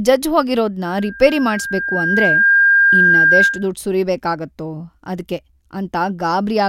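A 1.6 kHz tone swells from 0.83 s to 3.69 s, before "ಸುರಿಬೇಕಾಗತ್ತೋ ಅದ್ಕೆ": loudspeaker feedback squeal, the microphone re-amplifying its own loudspeaker.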